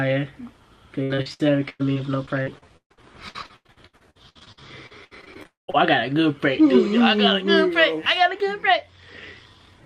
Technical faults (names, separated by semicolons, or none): repeated packet loss (robotic sound); long network dropout